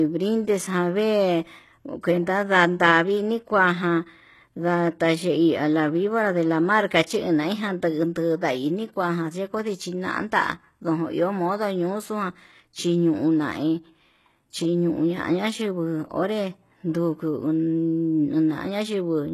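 Throughout, s sounds turn gritty and metallic and nothing passes 12.3 kHz, likely HE-AAC compression near 16 kbps; unlike low-passing, the treble stays synthetically bright.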